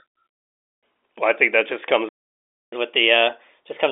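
At 2.09 s, just after "I think that just", the speech cuts out mid-phrase and the line goes completely silent for about 0.64 s, resuming at 2.73 s. This is a playback stall: the player most likely ran short of buffered data, or its output thread was held up, so nothing reached the speaker until the stream caught up.

From 2.73 s to the end, the speech runs quicker and sounds brighter and slightly chipmunk-like. That is catch-up at higher speed: to recover the time lost in the stall, the player resamples its backlog at 1.1 times normal rate. Speed and pitch rise together, the pitch by roughly a semitone and a half. All of this sits within the narrow telephone band of the G.711 coding, with nothing above about 3.8 kHz.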